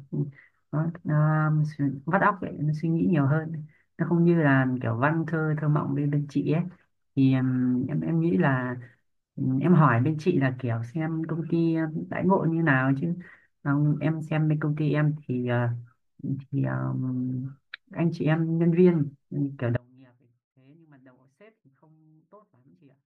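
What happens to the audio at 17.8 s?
Nothing goes wrong at 17.8 s; the audio runs through that moment intact, with no dropout, click or other fault.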